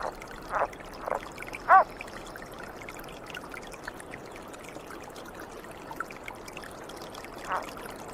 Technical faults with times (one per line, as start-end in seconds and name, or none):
3.18-7.65 call bitrate drop